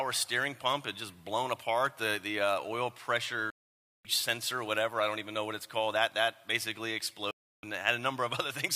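At 3.50 s the audio drops out for about 0.55 s, resuming at 4.05 s, and again from 7.31 s to 7.64 s: a digital broadcast dropout. The receiver muted with a 3 ms fade when frames failed, and everything sent during both gaps is lost.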